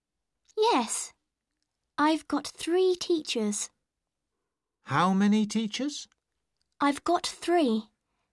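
Nothing technically wrong turns up anywhere in the audio, so there's no fault to point to here.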